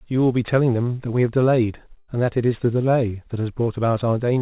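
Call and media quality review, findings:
Burst of packet loss, 1.98 to 2.10 s. The last sound is stretched and faded for about 100 ms by jitter-buffer concealment, then the speech resumes with about 100 ms skipped. The band stops at 4 kHz, which fits a G.711 mu-law call path.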